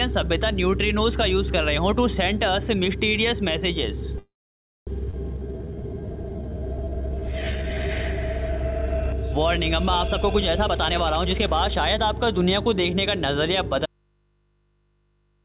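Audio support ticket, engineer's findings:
Call audio freeze, 4.18–4.89 s: last sound extended as a fading buzz or hiss, then about 0.56 s of silence. Likely cause: packets held in transit, jitter buffer ran dry, receiver concealed the gap. Playback resumes where it stopped, nothing lost, 0.69 s of added delay.

Skip ahead, 5.11–5.15 s: abrupt forward jump with only a 20 ms bridge. Roughly half a second of audio discarded, most likely by the jitter buffer flushing backlog after the freeze. Delay cut by roughly 0.4 s; both sides of the jump spliced almost directly.

Jitter buffer slow-down, 5.39–7.88 s: audio plays at 82% speed, same pitch, sustained sounds drawn out. Receiver repeating single pitch periods and pause fragments to rebuild its reserve; 452 ms added over the stretch.

Jitter buffer speed-up, 10.09–11.98 s: audio runs at 118% speed, pitch unchanged, hurried feel. Buffer above target depth, so the receiver trimmed short pitch-period segments repeatedly, roughly 0.4 s removed in total, to pull latency back down.

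Audio dropout to a faint residue, 13.86 s to end of clip: signal cuts out abruptly, not a fade. Only mains hum remains, about 45 dB below signal level. Likely cause: source lost upstream while the downstream path stayed live and picked up hum from the open input. Through the G.711 A-law call path nothing is present above 4 kHz.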